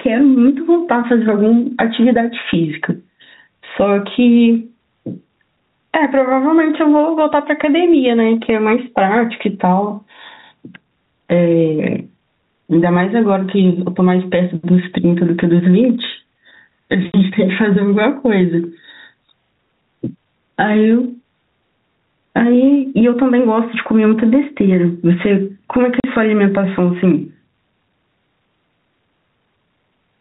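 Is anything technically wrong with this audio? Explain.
Yes. The speech has two faults.

Gain pumping runs through the whole clip. The level swings by roughly 10 dB. Loud and soft parts sit closer in level, and the sound is squashed. This is likely from gain set too high, with a fast limiter or compressor clamping every peak.

Packet loss filled with silence occurs twice. The first hole is at 17.13 s and lasts 20 ms, which fits one lost packet. The second runs from 26.00 to 26.04 s, about 40 ms, which points to two packets. Missing audio was replaced with silence, so the speech drops out abruptly with hard edges. The telephone-band sound, with nothing above 4 kHz, comes from the G.711 coding and is not a fault.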